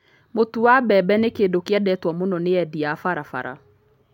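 No technical faults can be heard anywhere in this speech recording, and the signal holds steady from its first moment to its last.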